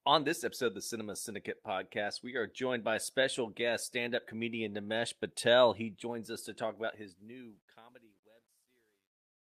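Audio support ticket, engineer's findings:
Truncation distortion on the fade-out, 6.78 s to clip end, worst from 7.6 s. The fade's quiet tail turns gritty. Probable component: gain or fade stage truncating without dither, consistent with an 11-bit path. Waveform: tail collapses into square steps. Spectrogram: broadband hash and harmonic smear tracking the speech.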